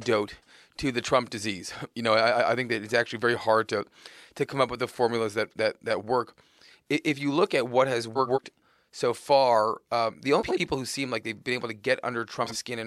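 Frames out of order in this speech at 8.15–8.38 s, 10.39–10.60 s and 12.43–12.56 s: neighbouring blocks of about 93 ms (46 ms in the last) play swapped, giving a garbled flutter and no lost time.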